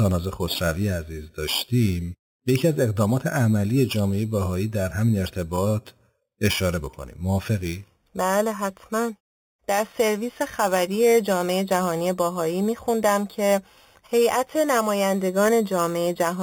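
Imaging from sample-and-hold upsampling runs throughout the speech. The audio was raised to a higher rate, likely from 8 kHz to 48 kHz, by repeating each sample without smoothing, so mirrored spectra appear, the first from 4 to 8 kHz about 16 dB down, heard as a metallic fizz tracking the speech.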